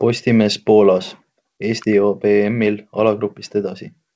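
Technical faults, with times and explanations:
No faults found in this speech; it carries the usual signature of a wideband call codec, with nothing above 8 kHz, consistent with G.722.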